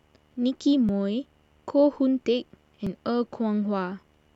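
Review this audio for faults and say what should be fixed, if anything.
A video or display buzz runs through the whole speech clip: a steady buzz at 75 Hz with hash above it, sitting about 40 dB below the signal. Its 75 Hz fundamental and the hash above it set it apart from mains hum, which would sit at 50 or 60 Hz. The buzz comes from a monitor or video cable coupling its field-rate energy into the audio path. Rerouting audio cables away from displays and video leads, or using balanced connections, should prevent it.

Two skips occur, at 0.89 s and 2.87 s, each losing around 20 ms of speech. The two sides of each gap are butted together with no silence between them. Unlike a dropout, which leaves a hole of silence, the sound jumps straight ahead. The spacing of about 2 s between them points to the likely cause, audio missing between chunks, with a short piece lost each time the recorder or processor closes one chunk of roughly 2 s and opens the next. 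Configuring the recorder to write or process chunks with overlap or a continuous buffer should prevent the gaps.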